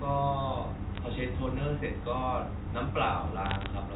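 Bit errors on a digital phone line hit this telephone-band speech at 0.95 to 0.98 s and, more densely, at 3.45 to 3.66 s. Each flipped bit corrupts one G.711 sample, so sign or high-bit hits give sharp ticks that cluster into crackle.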